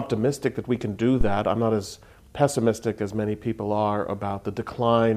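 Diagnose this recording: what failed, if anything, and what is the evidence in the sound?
The failure is in the analogue input stage: a phantom power thump at 1.21 s, running to about 1.44 s. You get a deep, low thud peaking around -9 dBFS that dies away with a decay of roughly 51 ms. That's the supply being switched on a live input. The sudden DC step charges through the coupling capacitors, and the preamp passes the resulting low-frequency transient straight into the recording.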